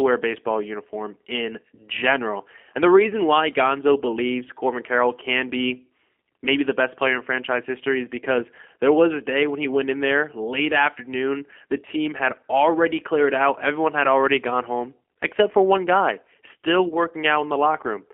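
The whole recording sounds rough and faintly synthetic, squeezed into a narrow telephone band with nothing below about 250 Hz or above 3.4 kHz, so consonants lose their crispness and the tone has a reconstructed quality throughout. That is the G.729 codec (the G.729A variant) at 8 kbit/s. It doesn't send the waveform itself. It models each short frame with a vocal tract filter, a pitch predictor and a handful of pulses, and the damage from that rebuilding is plainly audible here.

From 16.89 to 16.97 s, right after "for one guy still", the sound briefly smears into a stretched fragment that sags in level and stays slightly weak and distorted for a moment before recovering. This is VoIP packet loss concealed by the speech codec. About 30 ms of audio went missing, which points to a single lost packet. The decoder covered the gap by extending its last pitch and filter at falling gain, and because each frame builds on the previous one, the distortion persists briefly after the data returns.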